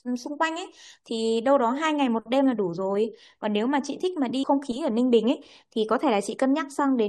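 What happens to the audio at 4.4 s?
At 4.43 s the speech jumps ahead with a small blip and no silent gap, likely a stream segment skipped, so a stretch of the programme is simply missing.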